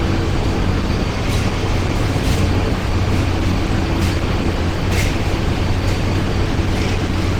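An everyday-sound recording with plainly audible Opus compression throughout: textures turn grainy, rough and hoarse, which fits a low bitrate near 16 kbps, likely in hybrid mode.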